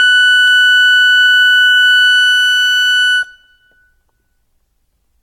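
Generation loss runs through the whole music clip. It was likely caused by repeated AAC-LC encoding, about four passes at a rate that sounds like 96 kbit/s. Each pass requantised on a shifted frame grid, so the sound turns swirly and hollow, attacks smear, and nothing remains above 16.5 kHz.

Dropped samples occur at 0.48 s, probably a single sample missing from the stream. The waveform jumps straight to a later value, removing no audible material but producing one sharp click, seen as a thin vertical line across the spectrum.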